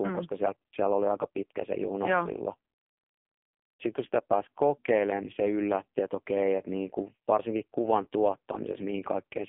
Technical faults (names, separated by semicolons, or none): AMR narrowband mobile codec